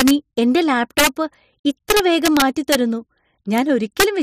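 Integer overflow hits speech peaks at 0.00–0.11 s, 0.98–1.07 s, 1.90–2.75 s, 3.58 s and 4.00–4.04 s, overdriven by about 2, 4, 3, 0 and 2 dB. Peaks past the integer limit wrap to the opposite sign, cracking far sharper than clipping's flattened tops.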